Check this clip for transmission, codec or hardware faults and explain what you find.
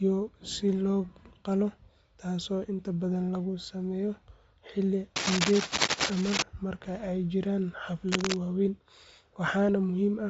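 Two faults affect this speech clip. Throughout, Bluetooth LC3 compression is the likely cause: a low-rate transform codec, consistent with 32 kbps and 10 ms frames, discards the upper spectrum. Nothing remains above 7.7 kHz, and the speech sounds grainy and breathy.

Cable scratch noise comes from 5.16 to 6.43 s and from 8.08 to 8.38 s. A disturbed cable or connector is the likely cause, as its contact resistance flickers. This adds rough scratching bursts roughly as loud as the speech.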